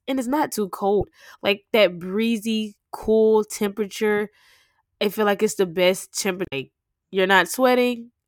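Right after "and it's not too", at 0.97 s, there's a quick glitch lasting about 60 ms. That's damaged data in the compressed stream. Some of the data there is wrong, so the decoder can't read those frames, loses its place and hunts for the next valid header. The same thing happens after "like it's the best", from 6.42 to 6.53 s, a slightly longer blip of about 110 ms.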